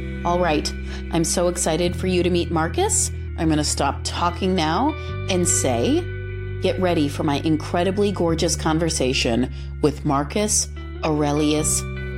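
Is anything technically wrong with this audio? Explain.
Yes. At 3.28 to 3.86 s and again at 9.13 to 10.31 s the sound drops abruptly in pitch by 113 cents, just over a semitone, while running 6.3% slow, then snaps back. The likely cause is a drift correction step, where clock-matching software changes the playback rate in one jump to manage its buffer. Tape wow glides gradually, but here the detuning switches on and off instantly and holds steady between.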